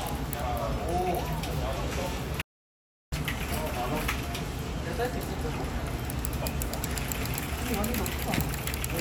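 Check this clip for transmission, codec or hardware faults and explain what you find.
One fault stands out: an audio dropout to silence from 2.42 to 3.12 s. The input signal was lost for about 0.71 s, likely through a momentary disconnection, a failed link or an accidental mute, while the recorder kept writing silence. The sound cuts off abruptly, leaving a gap of total silence with no background or room tone at all, then resumes mid-flow. Whatever occurred during those 0.71 s is missing from the recording.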